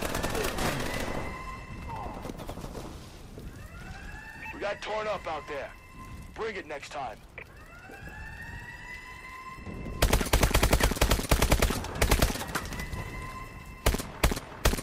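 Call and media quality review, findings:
No audible faults found across the clip; no action required.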